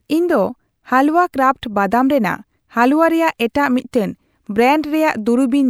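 No technical faults are audible.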